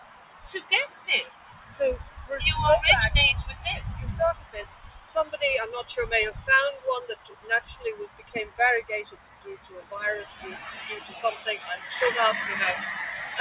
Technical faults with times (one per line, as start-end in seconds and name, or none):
0.00-13.41 noise suppressor applied to music or sounds
0.00-2.17 sound cut by the noise suppressor
4.34-5.37 sound cut by the noise suppressor
7.14-8.59 sound cut by the noise suppressor
9.04-9.92 sound cut by the noise suppressor
10.28-11.87 sound cut by the noise suppressor